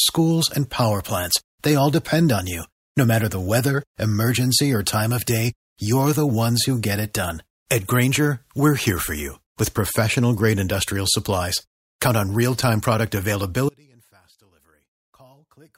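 At 13.69 s the speech cuts out abruptly and never returns. This is an audio dropout to a faint residue. Only a faint leak of sound remains, roughly 35 dB below normal. The likely cause is a lost feed while the downstream path stayed live.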